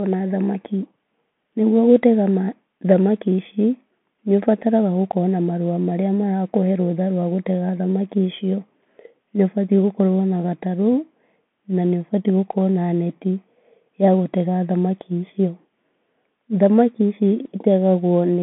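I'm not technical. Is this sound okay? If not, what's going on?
No. The whole recording has gone through a Bluetooth CVSD headset codec: everything above 3.8 kHz is cut off, with scratchy s sounds and a grainy hiss under the speech, unlike a plain phone line.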